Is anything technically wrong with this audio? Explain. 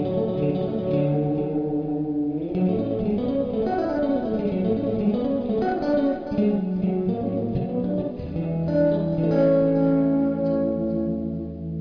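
No, nothing technically wrong can be heard anywhere in this audio.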